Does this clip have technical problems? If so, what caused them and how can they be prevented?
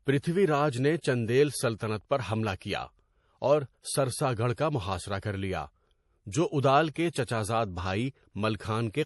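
Yes. Throughout, the speech sounds watery, with swirling sibilants and nothing above 11.5 kHz, a flat ceiling on a spectrogram. This is likely MP3 compression, fitting about 48 kbps. Encode at a higher bitrate or keep a lossless copy.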